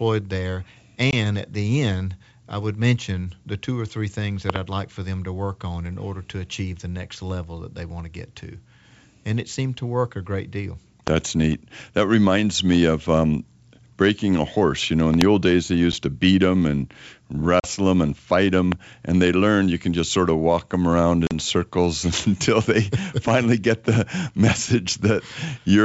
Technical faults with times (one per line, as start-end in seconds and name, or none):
1.11-1.14 packet loss on an ADPCM call
4.50-4.58 loud pop
11.07-11.10 loud pop
15.14-15.23 loud pop
15.92-15.95 packet loss on an ADPCM call
17.60-17.66 packet loss on an ADPCM call
18.72-18.74 loud pop
21.27-21.36 packet loss on an ADPCM call